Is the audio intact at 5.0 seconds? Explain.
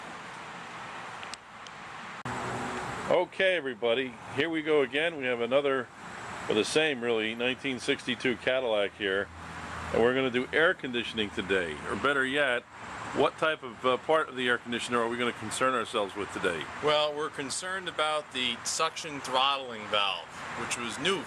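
Yes, at 5.0 seconds the audio plays through cleanly, with no dropout, click, distortion or other disturbance to be heard at that point.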